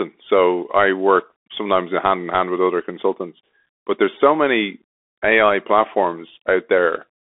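Throughout the speech, the sound carries the Bluetooth CVSD headset codec. Its one-bit delta coding, consistent with a 64 kbps stream, cannot track fast changes, so s sounds turn scratchy over a granular hiss. The band runs roughly 250 Hz to 3.5 kHz, with nothing above 3.8 kHz.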